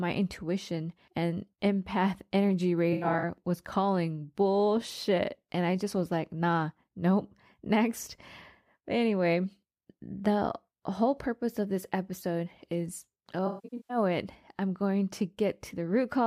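AAC frame loss with concealment occurs at 2.93–3.23 s after "intuition and empath energy" and 13.46–13.97 s after "of this episode is". The decoder fills the gaps from recent spectra, so they sound smeared and phasey rather than dropping to clean silence.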